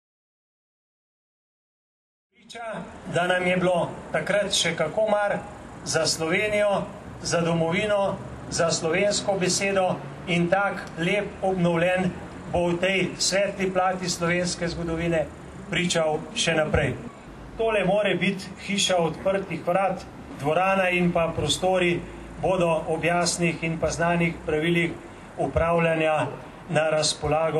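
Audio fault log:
Nothing to log here, just a gentle fade-in that eases up from around 2.5 s and reaches full level by 3.35 s, the way an editor would shape it.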